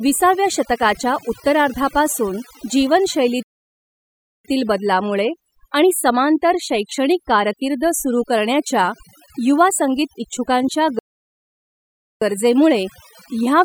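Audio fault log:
throughout, overdone noise removal: A noise reduction stage set far too strong pulls down any frequency band near its noise estimate, taking the quieter parts of the speech with it. Between phrases the background drops and breaks up into twinkling specks.
3.43–4.45 s and 10.99–12.22 s, playback stall: Output goes completely silent in mid-flow for about 1.0 s and then 1.2 s, likely because the player ran short of data or its thread was held up. The first gap ends just before "बदलामुळे आणि समांतर शैक्षणिक". The second falls between "करण्याच्या युवा संगीत इच्छुकांच्या" and "गरजेमुळे ह्या व्यवस्थेला".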